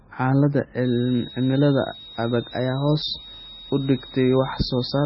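From start to finish the speech has a watery, swirly quality, with dull sibilants and smeared onsets. A spectrogram shows nothing above 5.6 kHz and speckled, flickering gaps below it. This heavy damage is likely MP3 compression at a very low bitrate, around 16 kbps.

From 0.85 s to the end, a switching supply whistle sits about 20 dB below the speech. This high tone wanders between 3.66 and 3.81 kHz. On a spectrogram it appears as a thin, gently drifting horizontal line near 4 kHz, just under the 5.6 kHz ceiling.

Between 2.51 and 3.03 s, playback runs 5.68% fast and pitch rises by 95.7 cents, nearly a semitone. The speech suddenly sounds sharper and hurried, then snaps back. The likely cause is a drift correction step. A spectrogram shows the harmonics stepping up together and dropping back at 3.03 s.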